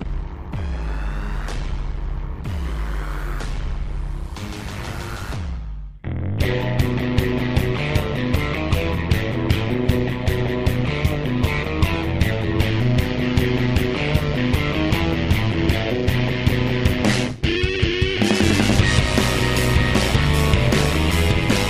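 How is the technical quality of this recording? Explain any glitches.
The technical quality is poor because one fault runs through the whole recording. Overlap-add ripple is present from start to finish: the frames were rejoined with an overlap whose gains don't sum evenly, so the level dips by about 11 dB around 100 times a second. That gives a rough, buzzy robotic flutter, visible as a regularly scalloped waveform envelope and vertical striping on a spectrogram.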